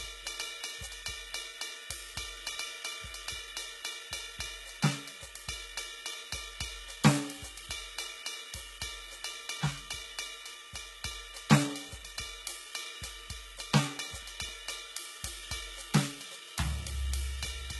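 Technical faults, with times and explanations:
throughout: HE-AAC compression. The encoder likely kept only the lower spectrum and rebuilt the treble by copying lower bands upward under a coarse envelope. The sound points to a very low bitrate, around 16 kbps. The damage is heavy. Nothing reaches above 11.8 kHz, and the treble that remains is synthetic, so its harmonics fail to line up with those below the crossover. That leaves the upper range of the music sounding grainy and artificial rather than bright.
13.97 to 14.49 s: CD scratch ticks. A blemish on the disc wiped out more data than error correction could restore, once per revolution. The player then either interpolated across the missing samples or muted them. The result is three brief ticks in about half a second, a steady spacing of roughly a quarter second. The longest is a tiny click or gap of roughly 1.5 ms, set into the music.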